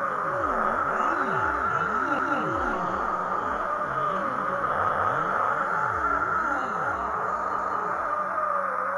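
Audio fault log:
2.19–2.39 s, 4.89–5.09 s, 7.59–7.79 s: overlapping chunks. A short stutter recurs at a steady interval as 200 ms of sound plays twice. The audio was handled in 2.5 s chunks, each one starting 200 ms before the previous one finished, so every join repeats that slice.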